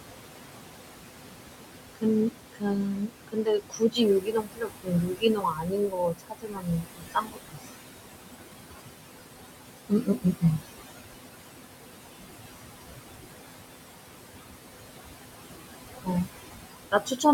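Speech recorded over room noise about 9 dB below the voice, with noise suppressor artifacts throughout: the suppressor pulls the steady background down by about 20 dB between phrases, so the residue pumps. Speech cut by the noise suppressor occurs at 1.94–2.06, 2.26–2.37, 2.53–4.01, 4.2–7.59, 9.89–10.43 and 16.91–17.25 s, where speech mistaken for noise drops by about 18 to 22 dB and sounds swallowed.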